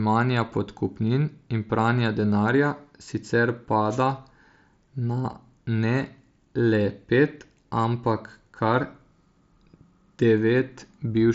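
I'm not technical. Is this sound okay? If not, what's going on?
Yes, the signal is in sound technical shape: the speech comes through a Bluetooth headset link working as designed, which limits the sound to below about 7.7 kHz and leaves only the light coloring that link normally adds.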